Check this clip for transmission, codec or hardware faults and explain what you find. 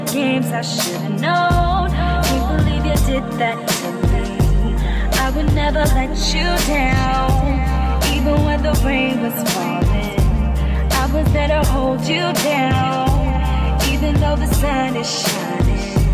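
Nothing faulty can be heard anywhere in this clip.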